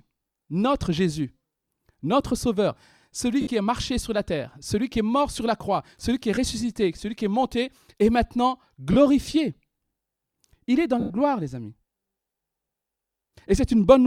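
At 3.41 to 3.47 s, 6.35 to 6.37 s, 8.93 to 8.96 s and 11.00 to 11.10 s the speech breaks into brief hissy smears, the signature of lost LE Audio frames. The decoder conceals each gap by repeating the last spectrum with scrambled phase, so harmonic lines on a spectrogram blur into noisy bands. The 100 ms gap, which fits about ten 10 ms frames, visibly decays on the waveform as the concealment fades toward silence.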